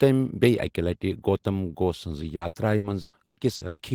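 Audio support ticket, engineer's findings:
Choppy, robotic speech from 2.35 s to 3.82 s. Repeated packet loss, seven dropouts in under 1.5 s, longest about 120 ms. Jitter buffer or network path upstream. Each hole gets patched by stretching the last bit of audio, so roughly 41% of that stretch is filler rather than real signal, hence the choppiness and clipped syllables. Worth checking loss stats on the link around then.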